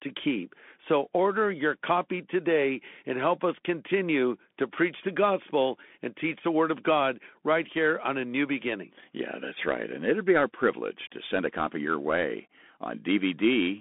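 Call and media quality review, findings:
Bluetooth CVSD headset codec, whole clip. Speech squeezed to roughly 200 Hz to 3.5 kHz, dead above 3.8 kHz. Clearly audible damage: scratchy s sounds, grainy hiss underneath. One-bit delta coding can't track fast highs, which fits a 64 kbps CVSD link.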